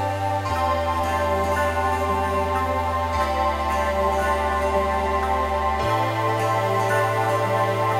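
No technical faults are audible.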